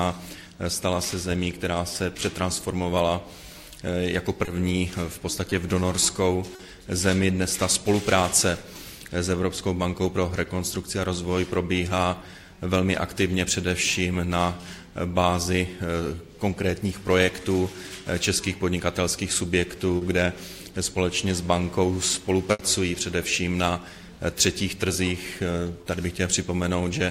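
At 4.45 s, 5.49 s, 6.55 s, 17.25 s and 19.97 s there is short concealed packet loss. The first, second and fourth last 20 ms each. The third and fifth last 40 ms. Each time, a sliver of audio failed to arrive in time. The decoder patched the hole by extending the sound just before it, then blended back into the real signal. Each patch is heard as a brief smear or wobble.

At 22.51 s a burst of packet loss removes 80 ms, ending near 22.61 s. The receiver kept the previous sound going and let it fade across the gap. It is heard as a held buzz or a dying hiss. The audio then jumps ahead, and the part in between is gone.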